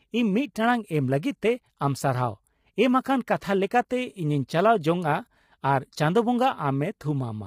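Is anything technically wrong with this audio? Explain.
Yes, throughout the speech there's heavy low-delay AAC compression, likely AAC-ELD at around 24 kbps: short frames smear the harmonics, leaving rough, grainy voices with noise between them and a thin, synthetic top.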